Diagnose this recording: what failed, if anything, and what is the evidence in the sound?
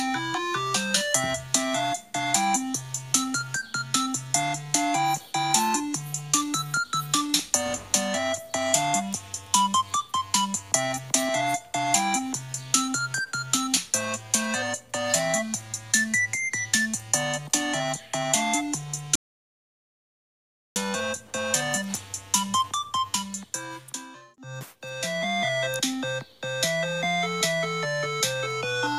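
An audio dropout to silence runs from 19.16 to 20.76 s. The sound cuts off mid-flow, leaving about 1.6 s of silence with no room tone. It then resumes abruptly. The input was likely lost at the device or link, while recording continued writing silence.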